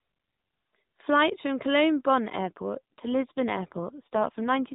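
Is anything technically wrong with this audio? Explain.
Yes. An AMR rate drop starts at 2.36 s and lasts to the end. The speech turns rougher and buzzier. That fits the codec stepping down from 12.2 to 5.9 kbps, leaving fewer bits to model the voice. The narrowband mobile band stays the same, with no gap.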